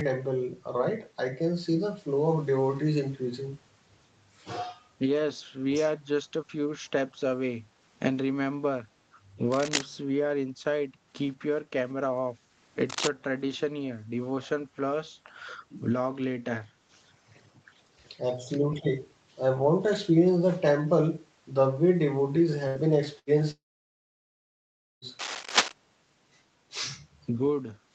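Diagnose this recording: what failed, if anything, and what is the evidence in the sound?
Echo leak at 5.95–6.00 s: a faint delayed copy of the speech, roughly 30 dB down, 192 ms behind. This is likely a far-end echo canceller letting loudspeaker pickup through.

Cable scratch noise at 9.52–9.82 s, 12.89–13.12 s and 25.19–25.72 s: dense, ragged scratching about as loud as the speech in the first two, about 5 dB louder in the last. This likely comes from analogue wiring, with a worn connector's contact resistance fluctuating.

Burst of packet loss at 22.67–22.78 s and 23.19–23.30 s: a network fault. Each gap drops 80 ms of audio, filled by a fading held sound before the speech resumes further on.

Long network dropout at 23.51–25.05 s: about 1.5 s of audio is missing. A brief fading continuation gives way to near silence, likely from a network outage, before the sound returns.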